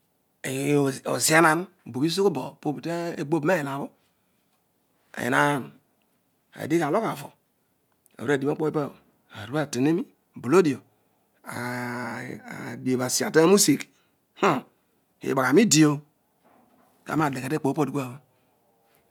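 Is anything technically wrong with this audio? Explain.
No, nothing is technically wrong with this speech recording. No audible fault turns up anywhere in it.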